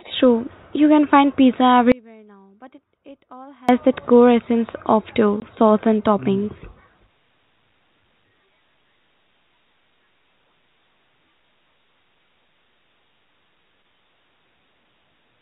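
At 1.92 s the speech drops out abruptly and stays gone until 3.69 s, about 1.77 s in all. It isn't a pause or a fade. The level falls off a cliff, and what's left in the gap is only a faint sound, roughly 30 dB below the signal's normal level. The most likely cause is an audio dropout to a faint residue: the wanted feed was lost while the path downstream stayed live. Then the speech snaps straight back in mid-flow.

At 5.40 to 5.42 s there's a short hole, 20 ms of dead silence with hard edges. That's packet loss filled with silence: one chunk of the stream never arrived and the receiver simply played nothing in its place. The length fits a single 20 ms packet going missing. The audio runs over G.711 A-law telephone coding, so the bandwidth stops at 4 kHz.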